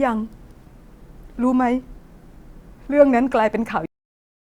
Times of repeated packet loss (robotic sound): none

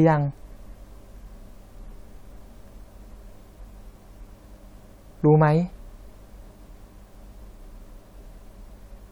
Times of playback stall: none

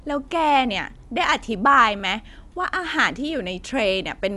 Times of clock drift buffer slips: 0.90-4.18

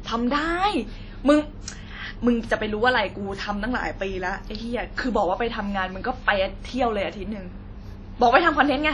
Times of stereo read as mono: none

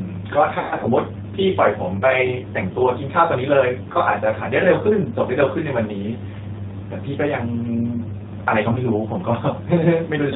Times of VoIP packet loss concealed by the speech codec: 0.59-0.86, 3.92-3.98, 8.73-8.80

